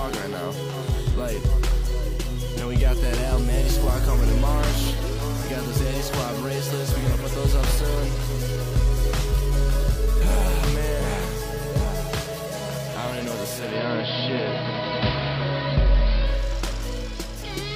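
At 13.46 s there's digital radio blending to analogue: the signal drops to the AM fallback over 345 ms, adding hiss about 25 dB down and a level shift of about 3 dB, then returns at 16.58 s.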